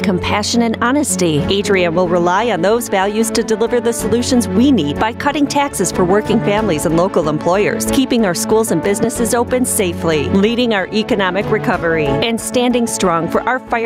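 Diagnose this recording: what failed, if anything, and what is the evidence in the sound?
The whole recording shows gain pumping: loud and soft parts are pulled closer in level, swinging around 10 dB. A waveform looks squashed, its floor rising between peaks. The stage is input gain, likely set far too high, with a fast limiter clamping it.

A single loud pop sits at 9.04–9.06 s, something like 15 dB above the surrounding sound, which carries on underneath. It shows as a narrow full-band vertical stripe on a spectrogram and a sharp spike on the waveform, likely a voltage step in the analogue wiring.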